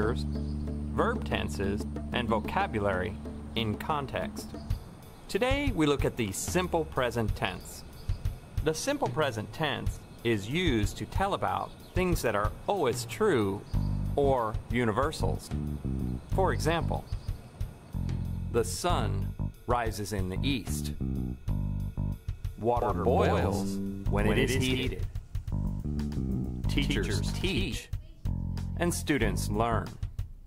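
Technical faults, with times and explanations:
22.82 to 27.78 s, doubled audio track: a second, undecayed copy trails about 150 ms behind, roughly 5 dB quieter. Likely a slower capture path mixed in.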